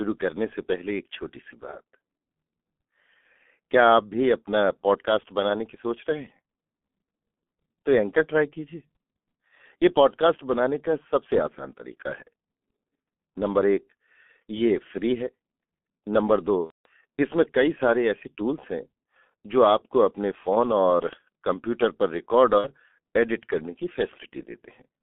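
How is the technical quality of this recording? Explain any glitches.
The technical quality is poor, with heavy low-bitrate telephone coding throughout and two brief dropouts.

Across the whole clip, the speech sounds muffled, hoarse and thin, with smeared consonants and nothing above about 3.4 kHz or below about 200 Hz. This is G.723.1 codec damage. The narrow telephone band cuts off the highs and lows. The coder also models the voice in coarse 30 ms frames and updates it sluggishly, so fine detail and crisp onsets are lost. The thin, gritty character fits a rate of roughly 6.3 kbit/s.

At 16.64 to 16.88 s and again at 22.58 to 22.67 s, the speech is stretched into a buzzy tone or coloured noise that fades and stays weak or distorted for a moment afterward. This is VoIP packet loss concealed by the speech codec. When packets went missing, the decoder kept extrapolating from its last pitch and filter settings at falling gain. 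The first gap lasts about 210 ms, which fits seven lost 30 ms frames. The second lasts about 60 ms, which fits two.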